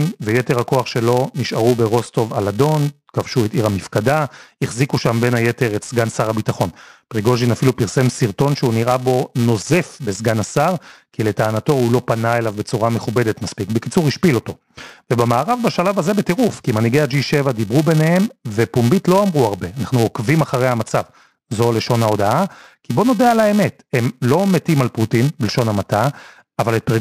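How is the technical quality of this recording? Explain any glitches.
The recording is compromised by one fault that runs through the entire speech clip. Throughout, a filter restarted on every block forgets its state and begins each block from silence. Every restart leaves a small transient, producing a 345 Hz buzz, which fits a 128-sample block, that rises and falls with the speech level. A waveform shows evenly spaced spikes about 2.9 ms apart; a spectrogram shows horizontal lines at 345 Hz and its multiples.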